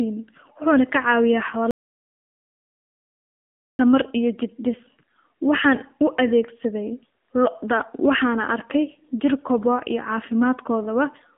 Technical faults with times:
0.00-11.38 AMR narrowband mobile codec
1.71-3.79 audio dropout to silence

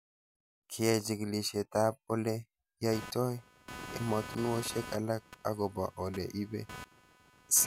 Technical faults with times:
2.92-7.67 computer activity noise

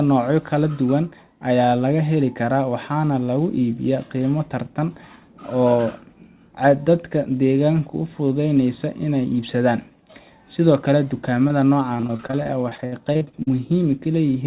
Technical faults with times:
11.48-11.51 short concealed packet loss
11.97-13.49 repeated packet loss (robotic sound)

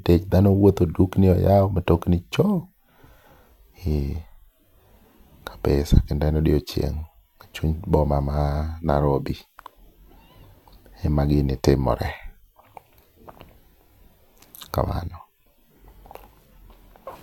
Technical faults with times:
none

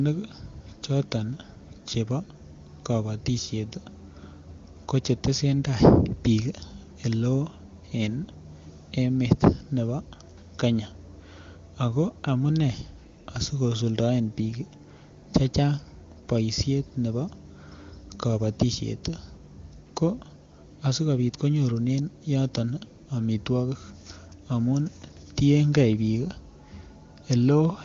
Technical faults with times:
none

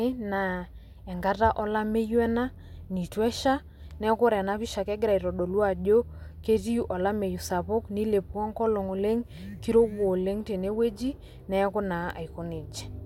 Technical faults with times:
none

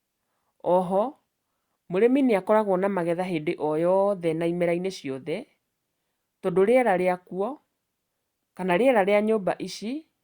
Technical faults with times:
none

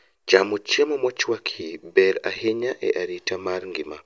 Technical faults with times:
none

